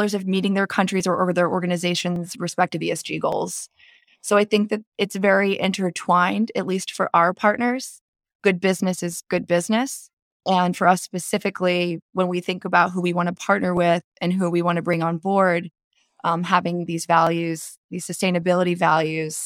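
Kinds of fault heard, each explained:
Clock drift buffer slips: a regular click in the speech roughly every 1.16 s, about fifteen times from 1.0 s, just after "of meeting their", to 18.4 s. The even spacing likely comes from two free-running clocks disagreeing by around 700 ppm, so a buffer overruns or runs dry and a few dozen samples are dropped or repeated at each slip. On a waveform each one is a small step or discontinuity. A spectrogram shows thin vertical broadband lines at even intervals.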